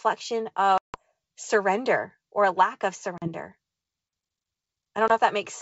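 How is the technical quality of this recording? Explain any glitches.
The speech drops out three times, with hard-edged gaps followed by a brief, slightly distorted restart. The underlying wideband sound is clear with only a faint upper-band hiss, which fits G.722 at its full 64 kbit/s rate.

These are packet losses on an ADPCM call. From 0.78 to 1.01 s, about 160 ms of audio is lost, a run of several packets, just before "surrender or a lack". Right after "or a lack of", from 3.18 to 3.28 s, about 40 ms goes missing. At 5.08 to 5.12 s, a single packet of about 20 ms is lost. Each hole is filled with silence. Because ADPCM sends only differences, the decoder's predictor and step size drift away from the sender's during the gap. Speech therefore returns with some distortion until the two resynchronise.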